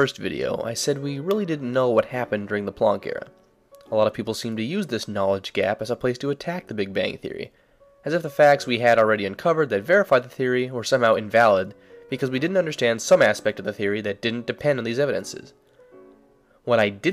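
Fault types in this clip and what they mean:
No technical faults are audible.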